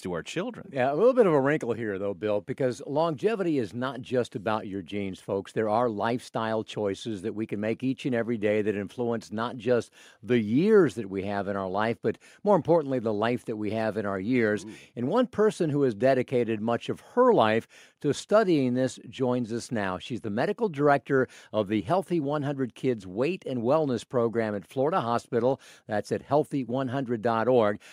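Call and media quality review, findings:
Nothing to flag on this one; the speech comes across without any audible fault.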